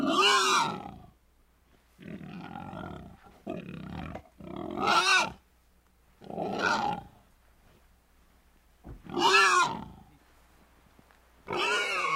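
No technical faults can be heard anywhere in the clip. There is nothing to report on timing, level or signal path.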